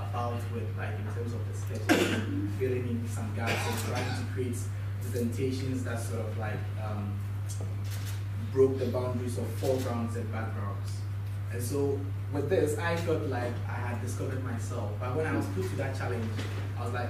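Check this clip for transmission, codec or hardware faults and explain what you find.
No transmission, codec or hardware faults were found.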